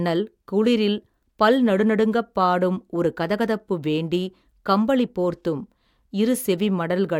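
Speech recording with no audible technical faults anywhere.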